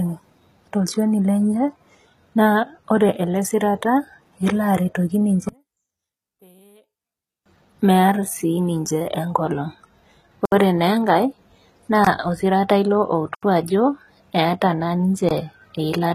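Speech throughout, carrying the sound of HE-AAC compression: the treble is synthesised rather than coded, so sibilants come out gritty and metallic, with nothing above 14.9 kHz. The damage is plainly audible and points to a low bitrate of around 20 kbps. From 5.49 to 7.46 s, one channel appears inverted: summed to mono, the centred speech drops by about 36 dB, leaving a faint residue, most likely because one channel's polarity is reversed for that span. Four blocks of digital silence cut in abruptly: 10.45 to 10.52 s (about 67 ms), 12.05 to 12.07 s (20 ms), 13.35 to 13.43 s (80 ms) and 15.29 to 15.31 s (20 ms). These hard dropouts fit an output buffer that was not filled in time.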